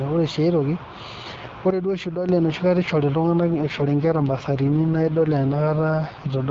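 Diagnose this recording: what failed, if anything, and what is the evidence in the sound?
From 1.70 s to 2.29 s the speech and the background noise drop together by about 8 dB, with an instant step at each edge and a sharp return. This sudden gain jump most likely comes from a digital gain setting in the driver or call-processing stage being applied without a ramp. An automatic gain control or a fade would glide over tens of milliseconds and would let the noise floor behave differently from the speech.

From 3.50 s to the end at 6.50 s the speech turns rougher, buzzier and more synthetic. This is an AMR rate drop at the network stage. Over a weak radio link the AMR-WB codec steps down from the 12.65 kbit/s heard earlier, which carries the speech clearly with only light coding damage, to 6.6 kbit/s. The band does not narrow and there are no gaps, which separates this from a fallback to narrowband or from packet loss.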